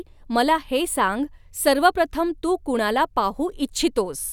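No faults to report: the speech runs without any audible dropout, glitch or other transport or device problem.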